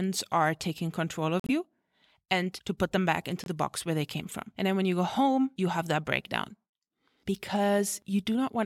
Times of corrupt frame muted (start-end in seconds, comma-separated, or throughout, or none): 1.40-1.52, 3.44-3.47